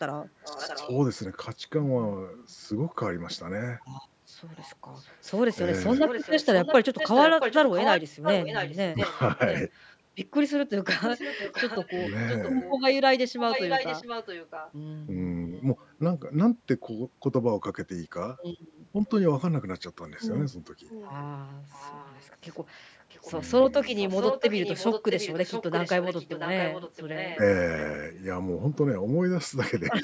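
From 0.41 to 0.91 s, and again from 4.47 to 9.96 s, 11.11 to 15.86 s and 20.89 to 27.4 s, an echo leak is heard: a second copy of the speech trailing the original by 675 ms. The likely cause is a loudspeaker on the far end whose echo canceller let part of its microphone pickup return down the line. The copy sits about 15 dB below the speech in the first stretch, rises to only about 5 dB below in the second, and is about 10 dB below in the last two. On a spectrogram the harmonic stripes and syllable onsets reappear, shifted 675 ms later and fainter. In the waveform, gaps that should be quiet instead hold a smaller replica of the preceding bursts.

From 8.92 to 8.97 s, inside the loudest echo stretch, speech suppressed in double talk shows up as a brief dip of about 10 dB lasting roughly 50 ms. The canceller likely mistook the talker for echo while both signals overlapped and turned everything down. 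It sounds like a tiny swallowed moment in the voice. The waveform envelope narrows in a short notch, and the spectrogram shows a thin, dimmer vertical band.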